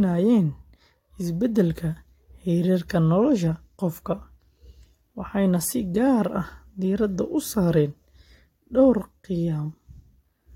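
No technical faults are audible.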